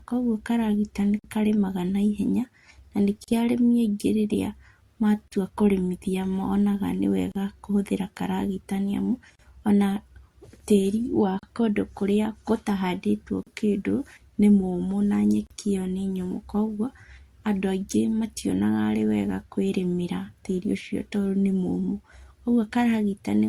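Separately encoded pieces of this speech were joined untrimmed, leaving a gap at each join of encoded pieces. Each run's start-up delay and padded final frame remain as a silence with smeared edges. The sound stops for 50 ms at 1.19 s, then for about 38 ms every 2 s at 3.24, 5.28, 7.32 (after "kũrĩmithia monaga"), 9.35, 11.39, 13.43 and 15.47 s, before carrying on.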